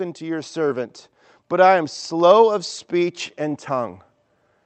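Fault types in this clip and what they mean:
Automatic gain rising: the level control on the input decided the speech was too quiet and slowly turned itself up. You can hear it from about 1.49 s to 3.98 s, where the voice and the background noise behind it swell together by about 4 dB over a couple of seconds rather than jumping. It rides on top of the call path's coding, which cuts the highs off at around 8 kHz.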